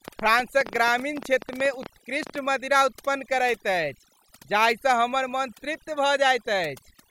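Speech, with overdone noise removal throughout: the noise reduction was pushed so hard that it switches off individual frequency bands whenever they sit near its noise estimate, taking the quieter parts of the voice with them. The background falls to near silence flecked with twinkling specks. On a spectrogram this looks like a black background scattered with isolated bright dots, and a voice whose harmonics are ragged and full of holes. From 0.08 to 2.36 s a train of clicks rides over everything, pauses included: about twenty similar pops at roughly 10.1 per second but unevenly spaced, peaking about 10 dB above the speech. The likely cause is electrical interference from nearby equipment or a faulty connection or power supply. The waveform shows sharp isolated spikes, and the spectrogram shows thin vertical lines running through all frequencies.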